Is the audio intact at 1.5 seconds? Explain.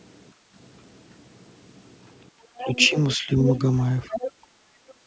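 Yes, the speech at 1.5 seconds is intact, carried cleanly through the call's microphone processing with nothing above 8 kHz and no fault at that moment.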